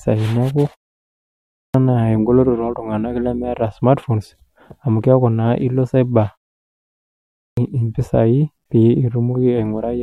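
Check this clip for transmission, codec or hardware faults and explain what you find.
One fault appears, a clipped start after a pause, twice: at 1.24–1.74 s after a 0.56 s silence, and at 7.09–7.57 s after 0.8 s. Each time the idle output device needs nearly half a second to wake, so speech returns abruptly without its opening sounds. Muted pauses, by contrast, fall silent but lose no speech.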